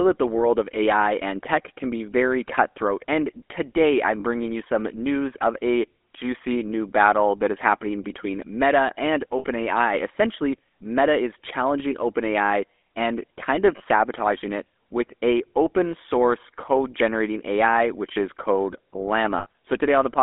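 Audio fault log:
throughout: GSM full-rate codec. The speech sits in a narrow band from 250 Hz to 3.5 kHz. It has a buzzy, gravelly roughness. The coder models the vocal tract and excites it with sparse, regular pulses, so fine voice texture is lost.
4.2 s, 9.38 s, 13.76 s, 19.38 s: lost GSM frames. The sound briefly freezes into a rough, metallic ring lasting 40, 60, 40 and 80 ms. The first falls between "cutthroat and today I'm" and "bringing you some news". The third follows "and kind of". Each gap repeats the last good frame.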